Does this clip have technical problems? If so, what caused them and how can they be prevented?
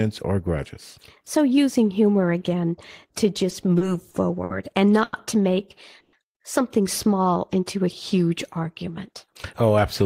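Yes. The speech in this clip has four network playback faults.

Repeated stalls (stutter) run from 3.38 to 4.51 s, just after "using humor again to". Packets arrived late or slower than playback, so the jitter buffer ran dry six times. Each time the receiver extended the last sound, filling about 150 ms in all. The longest wait was 60 ms, and about 13% of that stretch is filler. Nothing is lost. What marks it as stutter rather than a single stall is the cluster of short, recurring holds that make the sound drag. A jitter buffer that adapts its target depth upward when arrival rates fluctuate would absorb this.

A short stall from a late packet occurs at 5.04 to 5.14 s, just before "to make something". One packet missed its playout deadline, so the receiver stretched the preceding sound for 90 ms and then resumed exactly where it had paused, adding 90 ms of delay. Unlike the stutter, this is a single isolated hold. 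Unlike a freeze, it is brief and doesn't fade. A slightly larger playout margin, or prioritising audio packets on the network, would prevent it.

A call audio freeze follows at 6.00 to 6.14 s, right after "to make". The sound stops progressing and turns into 130 ms of fading fill that never drops to silence. The audio then continues from the same point, 130 ms later, with nothing missing. The likely cause is packets held up in transit until the buffer emptied. It differs from the short stall by its longer, decaying, synthetic-sounding fill instead of a plainly held sound. Reducing congestion on the path, for example with QoS marking, would help prevent it.

A jitter buffer speed-up spans 9.08 to 10.02 s. The buffer had built up excess audio, so the receiver trimmed tiny pitch-period slices repeatedly, removing about 50 ms in total. As a result, the audio plays about 5% fast at unchanged pitch and sounds slightly hurried. 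That unchanged pitch is what separates it from a sample-rate mismatch, which would shift pitch as well. Draining the buffer more gradually, or avoiding the delay spikes that overfill it, would prevent this.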